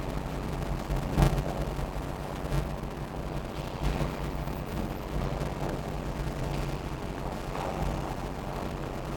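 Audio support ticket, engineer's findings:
Steady buzz at about 93.8 Hz under the whole clip. Audio plays slow at 0.625x speed, pitch roughly normal. Block size mismatch (padded): upstream stage writes short blocks, downstream reads full ones and zero-fills the remainder. Silent gap in every block gives the buzz at block rate. Pattern fits a 512-sample read against writes of about 320 samples. Check buffer config between producer and consumer stages.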